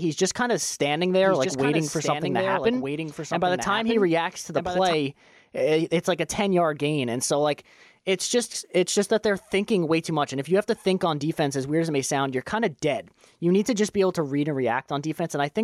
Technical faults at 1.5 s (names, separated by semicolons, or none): doubled audio track